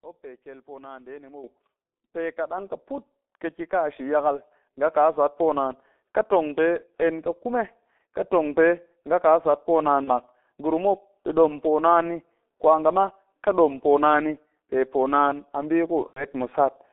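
From the start, the speech runs through the G.723.1 codec: it's squeezed into a roughly 250 Hz to 3.5 kHz telephone band and sounds heavily muffled and hoarse, with smeared consonants. That's 30 ms frames and a slow-updating voice model, consistent with a rate around 6 kbit/s.

Then the microphone volume gets stepped up three times, at 1.44, 2.58 and 4.89 s, by about 10, 5 and 2 dB. The call software decided the input was too quiet, so voice and background jump louder together, each in a single step.

Later there's VoIP packet loss concealed by the speech codec, at 10.04 s for 30 ms (fits one lost frame) and 16.07 to 16.25 s, fitting three lost frames. The decoder stretches the last pitch and filter into a buzzy tone or coloured noise that fades, and the voice stays weak briefly afterwards.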